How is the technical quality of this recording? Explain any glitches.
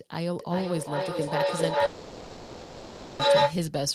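The technical quality is poor. Two serious faults overlap in the middle of the recording.

Feedback howl runs from 0.4 s to 3.63 s. A microphone and loudspeaker in the same room form a loop, and each trip around it adds level. The repeats grow instead of dying away and narrow to a tone near 500 Hz. It pulses roughly every 400 ms and peaks about 10 dB above the speech. That pulse suggests the loop's delay.

A long network dropout covers 1.85 s to 3.21 s. For 1.34 s no real speech is heard. In its place is a synthetic buzz or hiss that drags the last sound on, with no silent gap. The likely cause is a network outage, with the receiver filling the gap itself. When the speech returns, the missing section is simply gone.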